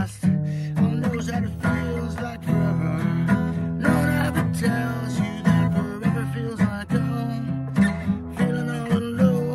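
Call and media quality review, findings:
Nothing stood out on listening.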